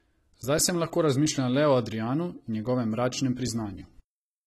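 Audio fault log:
Throughout, AAC compression: the speech has a dull, smeared quality with audible warbling and fizz on sibilants, and nothing above about 14.1 kHz, likely from an AAC-LC encode at a low rate around 32 kbps that starved the spectrum and cut off the top.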